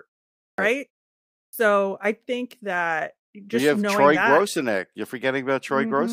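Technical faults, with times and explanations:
0.50 s and 1.46 s, clipped start after a pause: the output device drops into a sleep state during the preceding silences (about 0.49 s and 0.63 s) and must wake and relock before it passes audio again, so the opening of each following sound is swallowed, about 83 ms at 0.50 s and 71 ms at 1.46 s. The speech therefore jumps in abruptly from silence, with its first sounds missing, including at "I think that".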